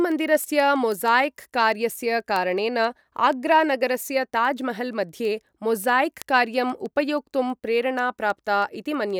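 Word clock ticks run from 0.12 to 9.10 s, about every 0.15 s. Unlocked clocks, roughly 150 ppm apart, drop or repeat one sample each slip.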